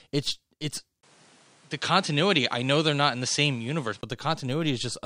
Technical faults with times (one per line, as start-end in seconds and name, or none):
1.01-4.03 input switched to a poorer device